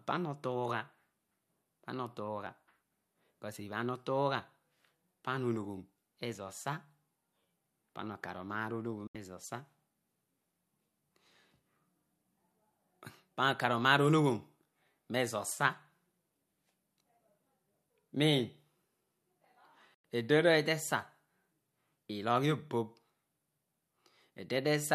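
At 9.07 s and again at 19.94 s there's a digital broadcast dropout: the receiver lost good frames and muted, snapping to silence with a very fast fade for about 72 ms, then 96 ms, which fits roughly three and four lost frames. That speech is simply gone.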